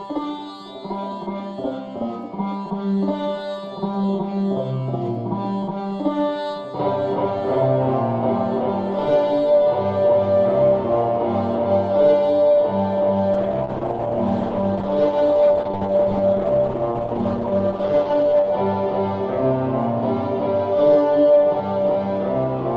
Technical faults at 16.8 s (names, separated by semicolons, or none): call bitrate drop